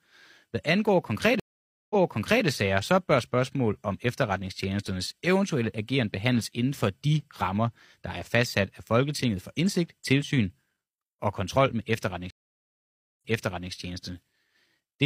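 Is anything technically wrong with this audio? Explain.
Yes. Stream reconnects occur twice in this speech. At 1.40 s, after "hvad angår", the audio drops out for about 0.5 s. It then resumes about 0.56 s earlier, before "sager så bør spørgsmål". At 12.30 s, after "og kontrol med", there is roughly 0.9 s of silence, and the audio then replays from about 0.51 s back. Each time, the connection broke and the server resent a burst of buffered audio. A freshly started decoder picked up from that earlier point, so each gap is followed by a repeated stretch of speech.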